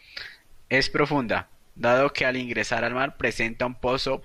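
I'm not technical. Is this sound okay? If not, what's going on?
Yes, this one's fine: nothing in it sounds broken or glitchy, so you can relax.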